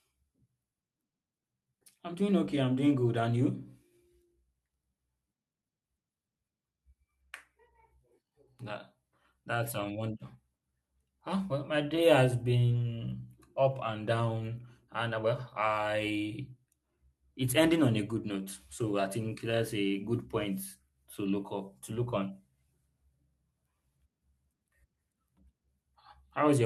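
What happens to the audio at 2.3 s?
That's a jitter buffer speed-up from 1.59 to 3.61 s: the receiver trims pitch-period slices, about a fifth of a second in total, so the speech hurries at 110% without changing pitch.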